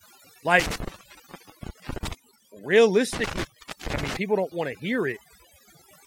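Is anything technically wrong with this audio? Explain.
Yes. Overdone noise removal runs through the whole speech clip. The noise reduction is set so aggressively that bands near the noise estimate are pulled almost to nothing, taking quiet parts of the voice with them. The background becomes near silence flecked with twinkling specks.

There are also two bursts of intermittent contact, where a loose connection opens the line. From 0.60 to 2.13 s the signal drops out for about 1.02 s. From 3.13 to 4.17 s, just before "people don't want to", it drops for about 0.43 s. Each dropout has crackle at its edges and faint hiss in the gap.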